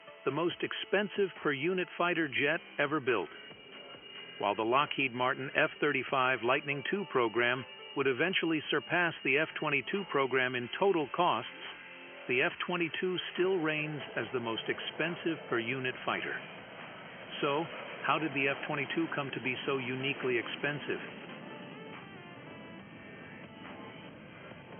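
No technical faults can be heard anywhere in the audio.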